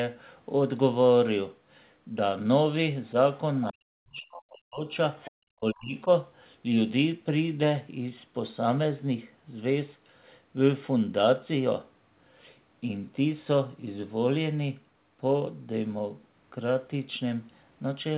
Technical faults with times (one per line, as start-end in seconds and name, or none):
3.70-4.86 speech suppressed in double talk
5.23-5.31 other side's voice leaking through
5.54-6.08 speech suppressed in double talk